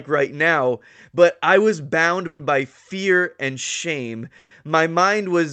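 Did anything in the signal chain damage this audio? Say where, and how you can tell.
Yes. A call audio freeze at the network and jitter-buffer stage hits at 2.27–2.41 s and 4.39–4.53 s. Delayed packets likely emptied the buffer, so the last sound was stretched into a fading buzz, visible as horizontal spectrogram streaks. The second freeze ends in a 10 ms flat line. Speech then resumes intact, about 120 ms later.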